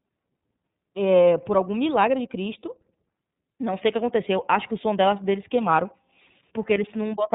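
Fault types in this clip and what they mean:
iLBC codec: a narrowband VoIP codec coding each 30 ms frame's excitation independently, here at a rate that fits 13.33 kbps. The speech sounds slightly rough and synthetic, with plainly audible coding damage; a spectrogram shows a hard ceiling near 3.8 kHz, with nothing above it for the whole clip.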